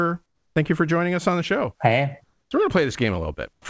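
From 0.26 to 0.56 s, just before "you for joining us", then 2.24 to 2.51 s and 3.53 to 3.65 s, the pauses carry comfort noise in place of the background: a steady, featureless hiss, about 1, 2 and 9 dB quieter, likely from discontinuous transmission. On a spectrogram the textured background becomes a smooth, even band ending at 8 kHz.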